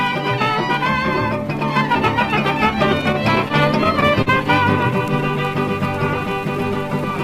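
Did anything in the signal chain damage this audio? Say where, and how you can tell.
Yes. Between 3.01 and 4.28 s, repeated stalls (stutter) at the network stage. Seven brief hitches, the longest about 45 ms, stretch the last sound rather than skipping ahead. That sets them apart from packet loss: late packets emptied the jitter buffer, and nothing is missing.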